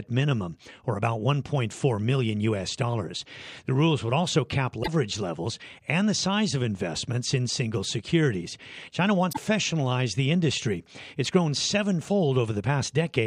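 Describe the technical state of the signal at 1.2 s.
The speech signal at 1.2 s is intact, with no audible fault at that moment.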